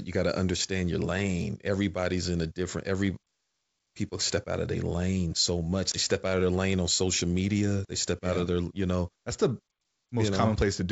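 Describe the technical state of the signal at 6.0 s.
Packet loss on an ADPCM call runs from 5.92 to 6.00 s, just after "their lane so much" and before "step out of their". A 20 ms hard-edged gap of silence, which fits a single lost packet, cuts the G.722 wideband stream. Because ADPCM codes each sample as a difference from a prediction, the receiver's predictor and step size drift from the sender's. The returning speech comes back with brief, slight distortion before settling.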